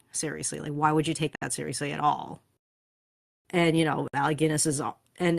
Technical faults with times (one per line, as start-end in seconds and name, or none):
1.36-1.42 gap at a join of encoded pieces
4.08-4.13 gap at a join of encoded pieces